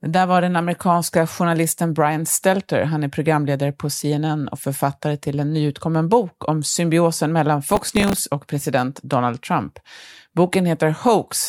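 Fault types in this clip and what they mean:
processor overload crackle: from 7.72 to 8.18 s, between "bok om symbiosen mellan" and "och president", a gritty tearing crackle rides over the speech. The processor repeatedly missed deadlines for very short buffers, about thirty times, each replaced by hard-edged stale audio.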